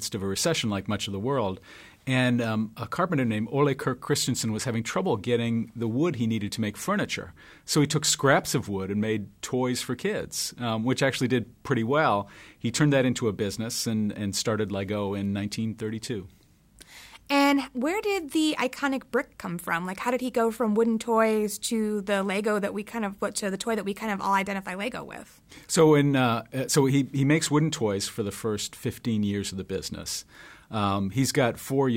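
A speech recording, and nothing technically wrong turns up anywhere in it.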